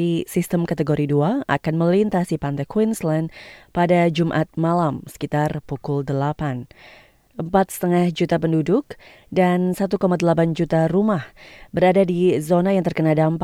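No technical faults are audible.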